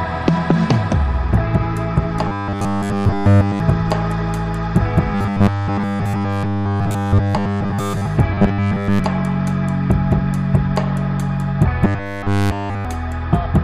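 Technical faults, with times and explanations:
2.28–3.60 s, 5.15–8.07 s, 8.32–8.99 s and 11.85–12.85 s: robotic sound from repeated short buffers. The sound becomes a rigid 100 Hz metallic buzz, likely because a 10 ms block is looped in place of nearly all the real audio. On a spectrogram this appears as an evenly spaced comb of harmonics every 100 Hz, and the waveform shows identical 10 ms cycles.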